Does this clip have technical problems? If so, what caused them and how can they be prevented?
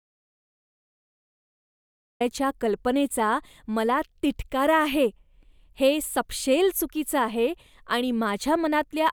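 Yes, there's an audio dropout to silence right from the start: the clip is dead silence, with no room tone at all, until about 2.2 s, when speech comes in mid-flow with "कल्पनेचा मला तिटकारा आहे". Likely the input was lost or muted while recording continued. Check connections and mute states, and monitor input levels before rolling.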